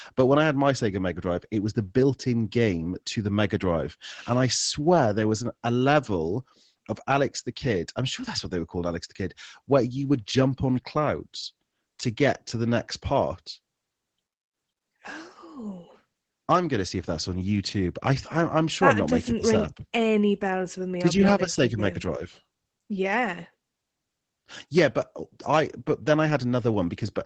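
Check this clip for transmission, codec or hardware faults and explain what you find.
The clip has one codec fault that runs for its whole length: Opus voice compression. The encoder is starved of bits and is running its linear-prediction speech coder, which fits a setting of about 12 kbps in SILK mode with 20 ms frames. At that rate the coder keeps a wideband channel, so nothing above about 8 kHz survives. It also quantises the excitation coarsely. The speech sounds plainly muffled and dull, with a hoarse, slightly robotic grain.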